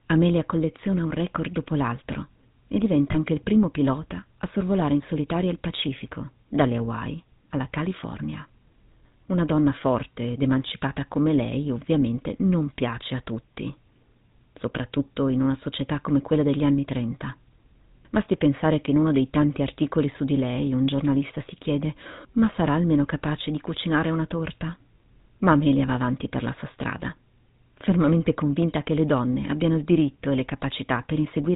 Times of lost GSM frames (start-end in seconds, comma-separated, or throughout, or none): 3.12-3.15